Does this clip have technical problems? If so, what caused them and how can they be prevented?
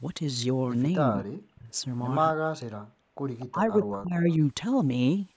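Yes. The speech dips sharply between 1.12 and 1.78 s, 2.32 and 2.67 s, and 3.5 and 4.29 s, by roughly 30 to 40 dB at worst. This is likely speech suppressed in double talk. The echo canceller could not tell the local talker from loudspeaker echo and turned both down. Better echo cancellation with real double-talk detection prevents it.

The background is gated by the echo canceller from 2.95 to 3.2 s. The room sound drops by about 40 dB while the far side plays, then returns. Gentler suppression that keeps a comfort-noise floor avoids this.

A faint delayed copy of the voice appears at 3.39–3.46 s and 4.3–4.36 s, about 25 dB below the speech. It lags by 238 ms. This is likely echo leak from a loudspeaker the canceller did not fully clean. Headsets or a better-tuned canceller prevent it. The call's microphone processing is working, with nothing above 8 kHz.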